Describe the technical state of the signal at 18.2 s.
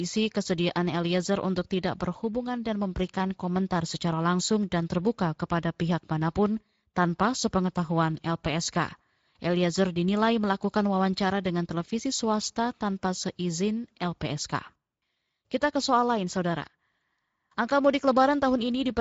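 At 18.2 s the speech is still passing through the Speex codec, as it does for the whole clip. Its CELP coder has too few bits to describe the excitation accurately, and the damage points to a mid-range bitrate of roughly 17 kbps. The speech sounds plainly degraded, grainy and hoarse rather than clean, and the spectrum stops sharply at about 7.7 kHz, with nothing above that cut-off.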